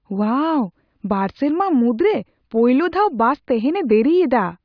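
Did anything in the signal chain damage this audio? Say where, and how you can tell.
No, nothing here was damaged.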